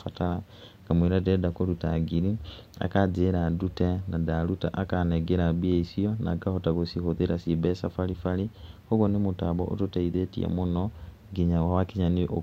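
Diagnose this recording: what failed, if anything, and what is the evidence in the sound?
Nothing failed here: I can't hear anything in this speech recording that points to trouble at any stage, so there's nothing to diagnose.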